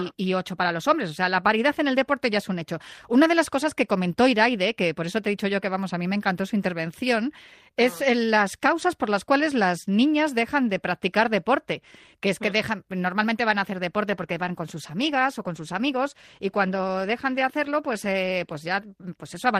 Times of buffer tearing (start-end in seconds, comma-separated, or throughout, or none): none